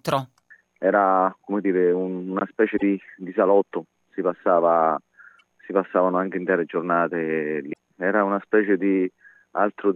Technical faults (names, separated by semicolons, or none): damaged data in a compressed stream